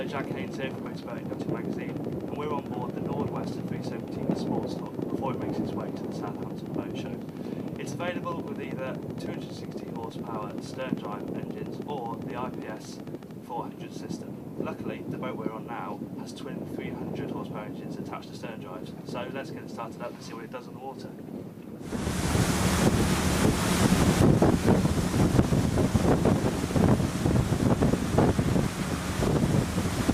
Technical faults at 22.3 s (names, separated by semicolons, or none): none